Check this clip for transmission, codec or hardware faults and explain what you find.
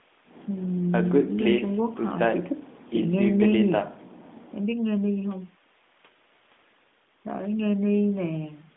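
No transmission, codec or hardware faults are audible: the speech sits in the narrow telephone band of roughly 200 Hz to 3.6 kHz that the AMR narrowband mobile codec imposes at what sounds like its top 12.2 kbps mode, with only light coding texture, and the call microphone processing's bass roll-off is as expected.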